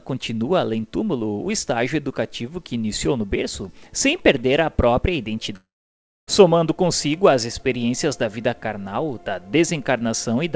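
At 5.56 s the sound turns into a fading buzz and then near silence for about 0.6 s, resuming at 6.29 s with roughly 0.7 s simply gone. This is likely a long network dropout, with the receiver stretching the last sound before giving up.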